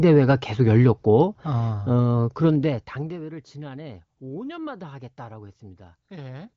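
From 2.37 to 3.25 s, zipper noise. The level falls about 20 dB in unsmoothed 1 dB steps, roughly twenty a second, each step clicking audibly.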